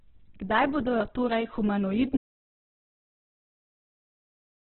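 From the first moment the speech has most likely been through Opus compression at a very low bitrate, around 8 kbps, with the encoder in its music mode and limited to narrowband. With so few bits, the encoder keeps each band's overall energy but fills much of the detail with folded or noise-like content, so the voice comes across rough, grainy and noisy rather than clean. Nothing is present above about 4.1 kHz, which leaves the speech dull and boxy.

At 2.17 s there is an audio dropout to silence. The input was likely lost, and the recording carried on writing silence. The speech stops abruptly mid-flow, and from there to the end of the clip there is total silence, with no room tone or background left. Whatever followed that point is missing entirely.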